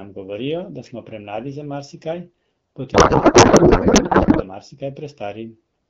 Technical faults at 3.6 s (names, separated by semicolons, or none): codec payload misread